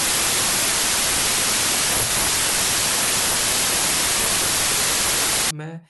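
From 0.0 to 5.51 s, a wrong sample width fault runs through the speech. The sound points to 32-bit samples read as packed 24-bit ones, so values mix bytes from neighbouring samples. Loud noise buries the speech, which plays at 0.75 times speed and lower pitch.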